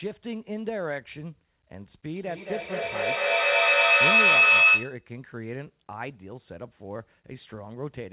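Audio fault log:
2.15–5.08 s, feedback howl: a tone near 3 kHz swells to about 15 dB above the speech, pulsing roughly every 200 ms, as loudspeaker output re-enters a microphone on the same call and gains level each pass until the loop breaks.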